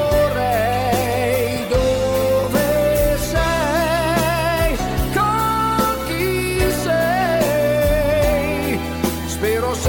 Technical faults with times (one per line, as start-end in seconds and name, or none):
none